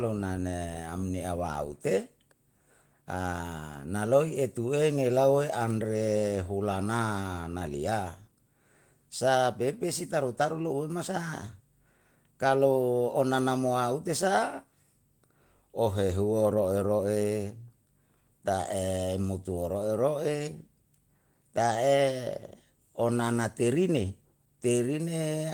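No technical faults are audible.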